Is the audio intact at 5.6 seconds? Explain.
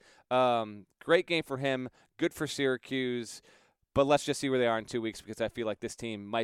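Yes, the speech at 5.6 seconds is intact, with no dropout, click, distortion or other fault at that point.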